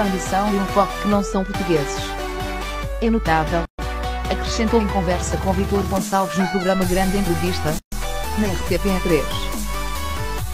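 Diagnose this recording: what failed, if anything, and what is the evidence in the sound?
Gap at a join of encoded pieces, at the codec stage. The sound drops out from 3.65 to 3.79 s and again from 7.79 to 7.92 s, each gap about 133 ms long and about 4 s apart, then resumes where it stopped. The audio was encoded in 4-second pieces and joined without trimming each run's start-up delay and final-frame padding. On a spectrogram each gap is a full-height blank vertical band with slightly smeared edges; the waveform drops flat.

DC step, at the converter or input-switching stage. At 6.76 s a low thump marks the waveform's zero line jumping to a new offset, which holds to the end of the clip while the sound itself carries on unchanged. This fits a converter recalibrating or an offset-bearing input being switched in. On the waveform the whole trace shifts off centre at that instant and stays there; the spectrogram shows a brief low-frequency burst at the step.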